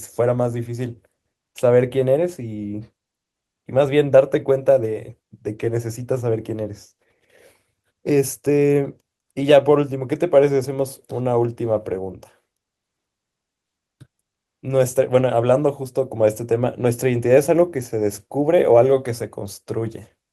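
Listening to the speech recording, nothing technical stood out as a problem at any point.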